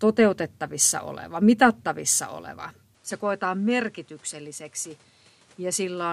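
A speech recording whose input was likely switched to a poorer device partway through: at 2.95 s the audio hands over to the new device with no gap and stays on it to the end. From that point nothing is heard above 11.7 kHz, so the speech loses its air and turns duller. The level drops by roughly 10 dB, and a new background noise appears, sitting around 30 dB below the speech.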